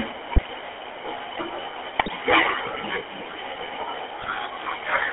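From start to finish the speech carries the buzzy, gravelly roughness of the GSM full-rate codec, band-limited to telephone range, roughly 300 Hz to 3.4 kHz. That coarse pulse-driven texture separates it from plain band-limiting. GSM bit errors break through at 0.32 to 0.47 s, 1.98 to 2.11 s and 4.22 to 4.34 s, where corrupted filter, pitch and gain values turn the voice into brief squawks, pops and gargling, not the silent gaps of dropped packets.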